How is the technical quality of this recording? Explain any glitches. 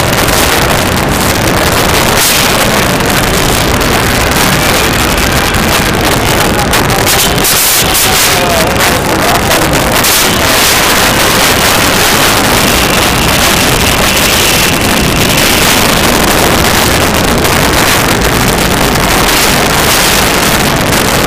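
The technical quality is poor, because one fault runs through the whole recording.

Integer overflow is present throughout. The signal was pushed about 14 dB past full scale. Instead of being held at the limit, each sample that exceeded the largest integer value wrapped around to the opposite extreme. Roughly one sample in fourteen crosses that line. Every loud peak therefore snaps across the entire range, producing violent, harsh cracks on the louder moments, far sharper and more abrasive than ordinary clipping.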